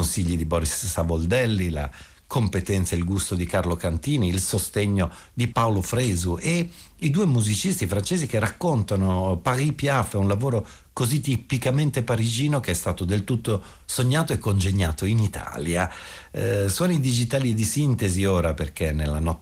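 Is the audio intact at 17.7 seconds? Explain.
Yes, the speech at 17.70 s is intact, with no dropout, click or other fault at that moment, only the light, steady character of the Opus voice compression that runs through the clip.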